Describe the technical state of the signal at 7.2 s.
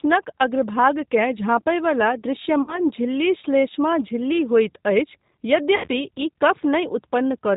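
G.729 codec damage is present at 7.2 s, as it is through the whole clip. The speech has been rebuilt by a low-rate predictive coder, which fits G.729A at 8 kbit/s: a vocal tract filter, a pitch predictor and a handful of pulses per half-frame stand in for the waveform. Nothing above 4 kHz survives, so the sound is dull and band-limited. The voice is plainly rough and synthetic, with a buzzy, processed texture.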